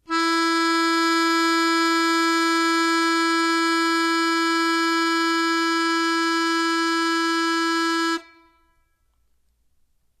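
Throughout the music, treble turns hissy and grainy with nothing above 14 kHz and blurred attacks, likely Vorbis compression at a low bitrate; grain rather than warbling separates it from MP3.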